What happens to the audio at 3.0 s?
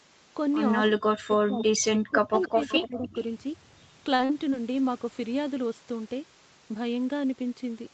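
The speech is being ducked hard there, which sounds like speech suppressed in double talk running from 2.07 to 3.15 s. With both ends talking, the echo canceller likely couldn't tell the local talker from loudspeaker echo, so it pulled everything down, cutting out in pieces for roughly 0.7 s in all, with dips near 40 dB at the deepest.

Riding on top of that, from 3.03 to 3.08 s, there's a brief echo leak: a faint scrap of the voice coming back about 292 ms late, roughly 30 dB under the speech. It's most likely the far end's loudspeaker pickup that its canceller didn't fully remove.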